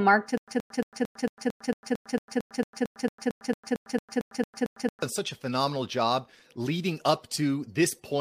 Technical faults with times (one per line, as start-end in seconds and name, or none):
0.38-5.02 stutter with silent gaps